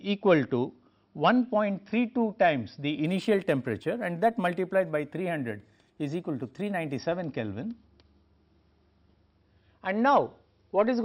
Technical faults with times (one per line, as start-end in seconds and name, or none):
3.05-6.98 imaging from linear upsampling